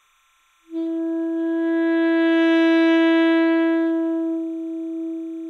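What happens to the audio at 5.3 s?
At 5.3 s, as throughout, timecode bleed sits faintly behind the sound: linear timecode leaking from a neighbouring track or cable, about 40 dB down, toggling between roughly 1 and 2 kHz in a 29.97 frames-per-second rhythm. That chirping warble sets it apart from a steady single-pitch whine.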